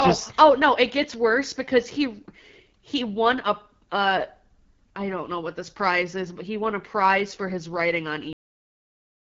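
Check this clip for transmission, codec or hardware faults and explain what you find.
Two faults are present: plainly audible wideband codec damage throughout, and an abrupt cut-off near the end.

AMR wideband (HD Voice) codec, throughout: speech sounds rough and raspy, pointing to one of AMR-WB's lowest rates, near 8.85 kbit/s; a spectrogram shows nothing above 7.5 kHz, with noise-filled upper band.

Cut-off end, at 8.33 s: the final buffers never played, so speech stops mid-sound and the waveform drops straight to flat digital silence, with no decay.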